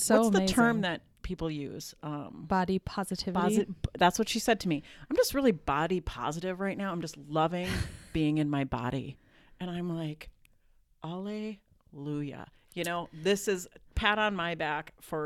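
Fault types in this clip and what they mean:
Nothing stood out on listening to this speech recording.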